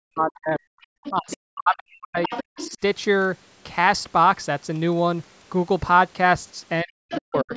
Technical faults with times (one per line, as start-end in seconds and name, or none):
0.00-0.66 speech suppressed in double talk
1.04-1.37 other side's voice leaking through
1.09-2.31 speech suppressed in double talk
2.23-2.77 other side's voice leaking through
2.69-2.79 speech suppressed in double talk
6.83-7.53 speech suppressed in double talk
7.09-7.20 other side's voice leaking through